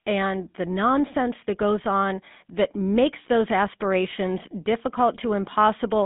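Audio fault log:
throughout GSM full-rate codec. The speech has a plainly audible buzzy, gravelly roughness. This comes from a coder that models the vocal tract and drives it with a coarse, regularly spaced pulse excitation, which fits the 13 kbps GSM full-rate scheme. Fine detail in the excitation is thrown away, so the sound turns grainy. The band runs from about 150 Hz to 3.6 kHz, and nothing passes above 3.8 kHz. This gives a narrow, telephone-like tone.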